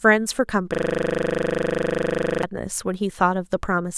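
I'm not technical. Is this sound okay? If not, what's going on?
No, it isn't okay. From 0.74 to 2.43 s the speech stops moving forward and you hear a system hang loop. The computer froze for a moment, but the sound hardware kept replaying the last tiny slice of audio it had, just 40 ms long. That slice repeats 42 times in a row, 25 times per second. Because each repeat is so short, it comes across as a steady buzz rather than a stutter.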